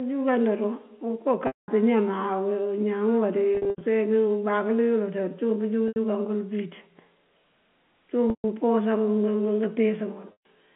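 Speech carried over a G.711 A-law telephone line, band-limited to roughly 150 Hz to 3.4 kHz, shows packet loss with pitch repetition at 1.47 s (210 ms), 3.55 s (170 ms scattered across 260 ms), 5.88 s (80 ms), 8.3 s (140 ms) and 10.32 s (130 ms). The receiver loops the last pitch period into each gap, so the sound turns buzzy and held before fading to silence and cross-fading back.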